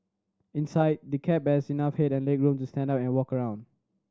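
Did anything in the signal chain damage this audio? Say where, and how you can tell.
No, nothing in this speech stood out on listening as damage from any stage of the signal chain.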